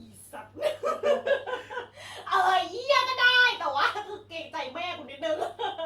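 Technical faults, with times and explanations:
No technical faults detected.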